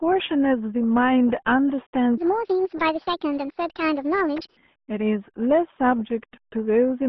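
From start to finish the RealAudio 14.4 codec leaves speech muffled and gargly, with nothing above 3.6 kHz, consistent with a heavily compressed 8 kbit/s stream. From 2.18 to 4.57 s a section at the wrong speed runs 1.53 times fast, raising pitch by about seven semitones, likely from playback against the wrong clock.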